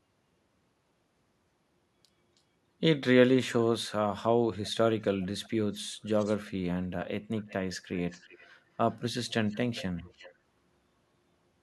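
Echo leak at 5.21–6.37 s, 7.38–8.55 s and 8.91–10.35 s: a faint speech copy trails 340–370 ms behind, likely loudspeaker pickup escaping echo cancellation.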